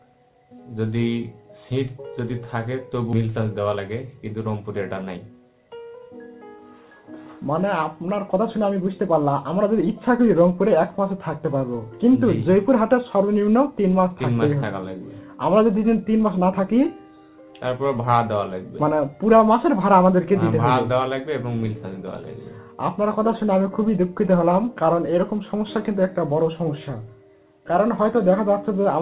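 At 3.12 s a jitter buffer speed-up begins and runs to 6.46 s. Playback is sped to about 108 percent with the pitch unchanged, so this stretch sounds hurried. The receiver had built up more buffered audio than its target, most likely after a burst of late packets arrived together, and it cut short pitch-period-sized pieces repeatedly to bring the delay back down. Roughly 0.3 s is removed in total.

Almost immediately, at 3.13 to 3.15 s, there is a skip ahead. About a second of audio is dropped outright, with no fill, and the material on either side is butted directly together. The result is an abrupt forward jump rather than a gap. It reflects a stretch being dropped while later audio was already queued, which cuts the delay by about a second in one step.

From 6.99 to 8.87 s a second, milder jitter buffer speed-up runs at about 105 percent and removes roughly 0.1 s. The hurried quality is subtler here.

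Throughout the clip, the band stops at 4 kHz, as expected from the G.711 A-law call path.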